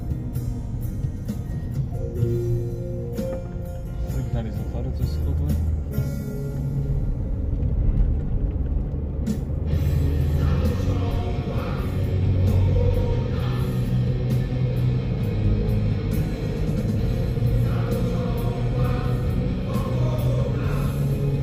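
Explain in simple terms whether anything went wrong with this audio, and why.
Nothing went wrong here: the signal comes through intact, with no technical problems to point to at any moment.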